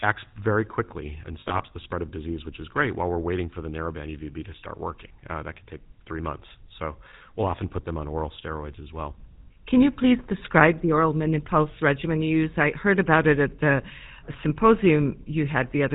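A speech recording carried throughout by the GSM full-rate codec, with plainly audible coding damage. The codec represents the vocal tract with a short-term filter and excites it with a regular pulse train built from only every third excitation sample, and nothing above 4 kHz survives. The result is a band-limited, buzzy, gravelly texture across the whole recording, consistent with 13 kbps full-rate coding. Between 1.4 and 1.63 s, after "acts very quickly and" and before "the spread of disease", there are lost GSM frames. About 100 ms of audio went missing in several gaps scattered across roughly 200 ms, which fits around five dropped 20 ms frames, the longest run being around 70 ms. For each missing frame the decoder repeats the last good frame's parameters, so instead of clean silence the sound smears into a brief rough, metallic ringing that stutters through this stretch before normal decoding resumes.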